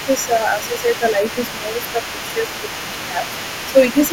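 An echo canceller that likely failed to remove all of the far end's loudspeaker sound from the microphone lets the other side's voice leak through for the whole clip, from 0.0 to 4.12 s. That second voice sits around 15 dB beneath the main talker: a quieter competing voice behind the speech.

Because both sides are talking at once, the same canceller likely cannot tell its own talker from the echo and turns everything down, so speech is suppressed in double talk six times. From 0.06 to 1.17 s the level sags by a few decibels across roughly half a second. From 1.44 to 1.98 s it dips deeper, near 10 dB. Brief dips follow at 2.33 to 2.40 s, 3.10 to 3.19 s and 3.68 to 3.77 s, and a last one at 3.94 to 4.13 s. Each momentarily pulls the voice back.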